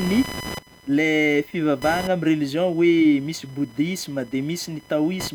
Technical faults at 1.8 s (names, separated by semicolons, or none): computer activity noise